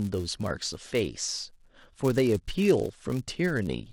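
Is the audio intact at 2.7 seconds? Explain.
No. At 2.66 s there is a single sharp click, a brief discontinuity in the waveform. The likely cause is dropped samples: a handful of values, well under a millisecond, go missing, so the signal jumps ahead. Nothing audible is lost, only the click remains.

Underneath, as throughout, a filter restarted on every block begins each block from silence. Each restart leaves a small transient, heard as a 172 Hz buzz that follows the level. That rate fits a 256-sample block.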